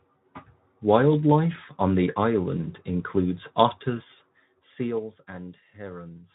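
Nothing in this speech recording stands out as a technical fault, so there's nothing here to flag or pin to a moment.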